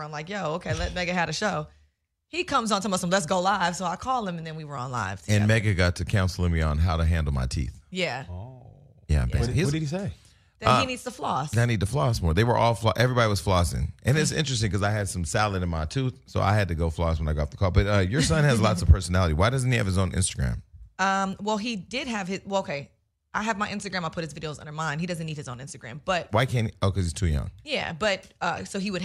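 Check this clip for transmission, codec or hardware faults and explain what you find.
No transmission, codec or hardware faults can be heard; the signal runs continuously without interruption or added disturbance.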